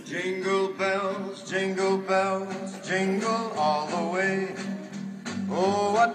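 Nothing in this audio stood out as a technical problem on listening.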